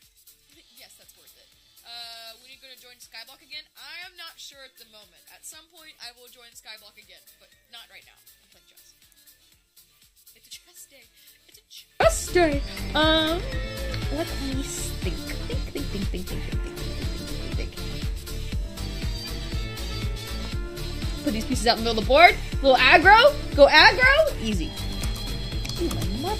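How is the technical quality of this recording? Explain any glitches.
Quality is compromised in the first half of the recording by a polarity problem.

One channel inverted, 0.0 to 12.0 s: the sound drops by about 24 dB to a faint copy. The likely cause is one stereo channel with reversed polarity, so the material common to both sides cancels when summed, leaving only their faint difference.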